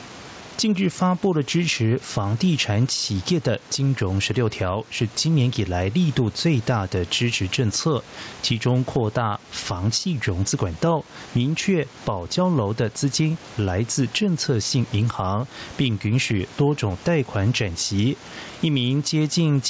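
Gain pumping throughout. The gain swings by around 10 dB, ducking under loud syllables, likely from excessive gain feeding a fast limiter.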